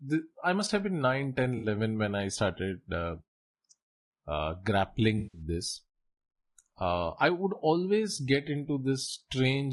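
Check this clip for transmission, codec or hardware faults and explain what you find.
Two kinds of fault are audible: codec damage throughout and two short dropouts.

Low-delay AAC compression runs through the whole clip. The speech sounds plainly coded, with noise filling the gaps between harmonics and a thin, synthetic top band. The likely cause is AAC-ELD, the low-delay call codec, at a low bitrate that fits about 32 kbps.

AAC frame loss with concealment occurs twice. It happens at 1.57 to 1.67 s, just before "when I started uh", and again at 5.17 to 5.42 s. In each case the decoder lost frames and rebuilt the gap from the last good spectrum. That leaves a patch of about 60 ms and then about 160 ms that replaces the real speech.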